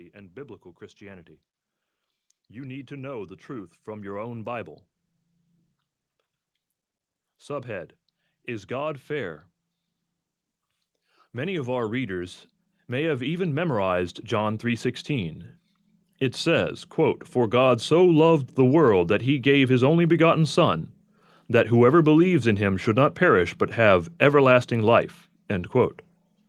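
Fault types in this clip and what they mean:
Automatic gain rising: The gain control judged the input too quiet and pushed its gain up step by step. Speech and background noise grow louder together, since the gain acts on everything. The first swell runs from 2.47 to 4.77 s and adds about 5 dB. The second is slower and larger, climbing about 12 dB between 11.19 and 20.63 s. Both changes are gradual ramps, not sudden jumps.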